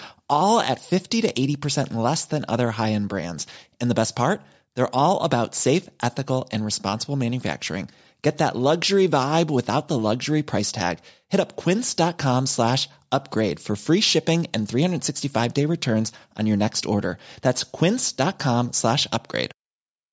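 Nothing in this speech stood out as a technical problem on listening.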